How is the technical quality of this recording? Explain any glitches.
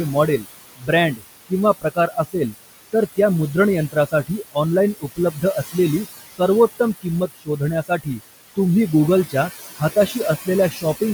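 The quality is compromised by an aggressive noise suppressor, which both leaves processing traces across the whole clip and eats into the speech itself.

Noise suppressor artifacts run throughout. The suppressor pulls down the bands it judges to be steady noise by about 17 dB, frame by frame. The room noise, which sits about 11 dB below the speech, therefore pumps, dropping away in pauses and swelling under speech.

Speech cut by the noise suppressor occurs at 0.14–2.54 s (ending just before "तर त्या"), 3.92–4.56 s, 4.95–5.75 s, 6.79–8.21 s and 9.78–11.01 s. The suppressor misread quieter speech as noise and attenuated it by up to about 21 dB, so soft consonants and word endings, from a fraction of a second up to about half a second per stretch, sound swallowed or faint.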